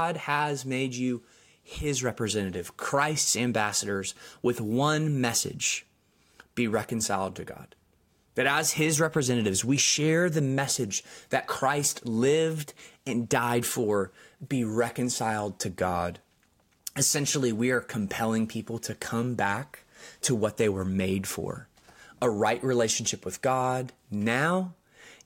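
Right through the clip there's a faint ticking riding on the speech at 20 per second, and it drops away in the pauses. That's a resampler restarted on every block: each 50 ms chunk got converted in isolation, which points to a 44.1 kHz to 48 kHz conversion, leaving a small glitch at every seam.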